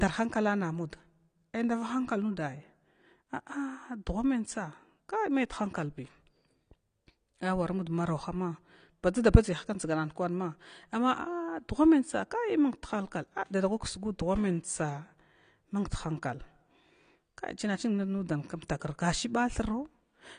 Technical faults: AAC compression

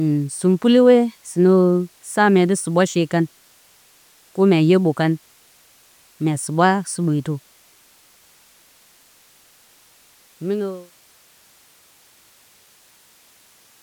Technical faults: none

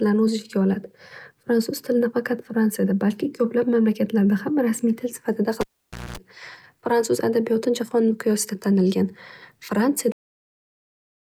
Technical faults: cable pulled and plugged in; cut-off end

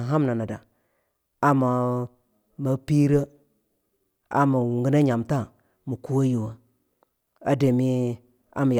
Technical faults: none

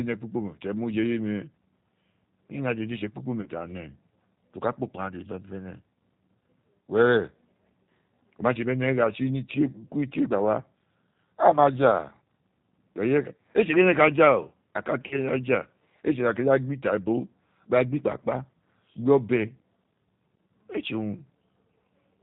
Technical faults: G.729 codec; VoIP packet loss concealed by the speech codec

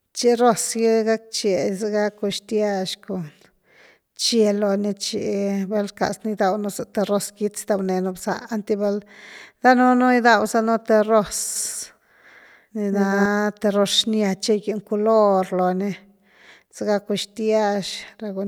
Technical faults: doubled audio track

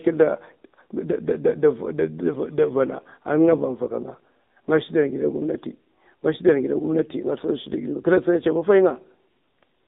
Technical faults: AMR narrowband mobile codec

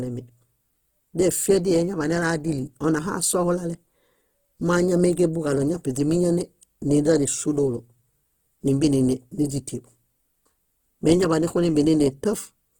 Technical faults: Opus compression

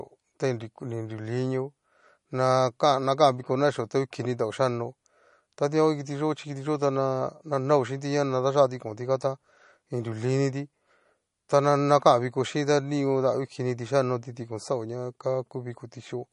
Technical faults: MP3 compression

